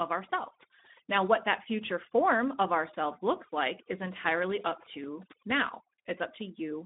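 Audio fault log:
throughout, overdone noise removal: A noise reducer set far too strong switches individual frequency bands down or off whenever they sit near its noise estimate, taking quiet parts of the speech with them, so pauses drop to near silence dotted with twinkling specks.
throughout, Speex codec: A CELP speech coder starved of bits for its excitation, which fits a setting around 11 kbps, leaves the speech noisy and hoarse, with clearly audible coding damage, squeezed into a 200 Hz to 3.7 kHz telephone band with nothing above 3.8 kHz.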